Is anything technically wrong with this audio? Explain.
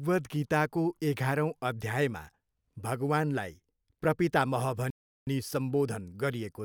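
Yes. At 4.90 s the speech cuts out in mid-flow and goes silent until 5.27 s, about 370 ms, before carrying on. That's a playback stall, likely the player running dry of data or its thread getting blocked, so output just halts until it recovers.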